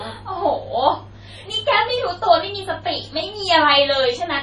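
MP3 compression runs through the whole speech clip, with nothing above about 11.3 kHz and heavy codec damage that fits a low bitrate near 32 kbps. Short of bits, the encoder likely cut the treble and zeroed weak frequency lines, leaving watery, swirling sibilants and smeared attacks.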